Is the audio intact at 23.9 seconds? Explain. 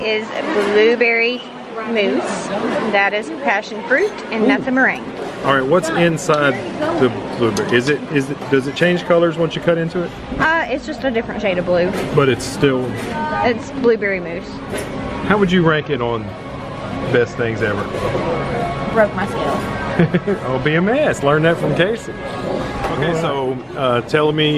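Yes, the audio is intact at 23.9 seconds, with no dropout, click, distortion or other fault at that point.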